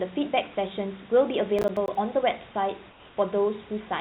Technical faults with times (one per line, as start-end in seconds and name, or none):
1.59-1.95 processor overload crackle
2.90-3.17 comfort noise in place of the background